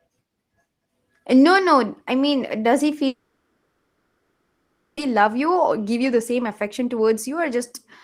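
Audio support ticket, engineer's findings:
Long network dropout, 3.07 to 4.99 s. Likely network-path stall: no audio arrived for about 1.9 s. Receiver concealment filled the whole gap, stretching the last sound into a fading buzz or hiss with no true silence. Speech resumes at 4.99 s, lost 1.9 s not recovered.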